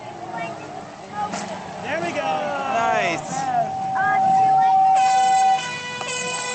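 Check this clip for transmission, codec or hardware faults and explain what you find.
Gain pumping runs through the whole clip. The gain ducks by roughly 5 dB under every loud sound, leaving the level squashed, likely because gain set too high feeds a fast limiter. Unlike a noise gate, the level never cuts to silence.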